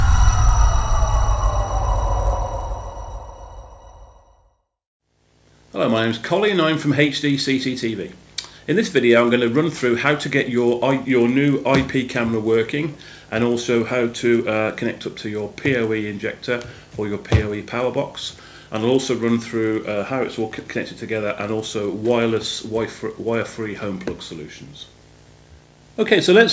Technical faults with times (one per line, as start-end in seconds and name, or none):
0.00-26.53 resampler restarted on every block